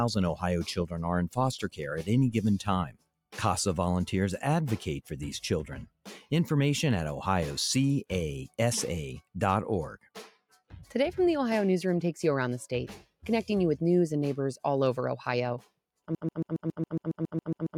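A noise suppressor meant for speech is running across the whole clip and treating sustained material as noise. It rides the level up and down by about 5 dB, so held parts and decays keep sinking while sharper onsets pass, giving a pumping, thinning character throughout.

At four points the suppressor clamps down much harder on sound it has judged to be noise: 2.87 to 3.09 s, 5.86 to 6.31 s, 10.29 to 10.72 s and 13.02 to 13.24 s. Each sound cut by the noise suppressor dips by about 15 to 19 dB for roughly a fifth of a second, briefly hollowing out the sound.

From 16.15 s to the end, playback has likely stalled, with the last buffered fragment resent over and over. This broken-record loop repeats a 0.14 s slice exactly, back to back, about twelve times, producing a rapid mechanical stutter while the audio that should follow never arrives.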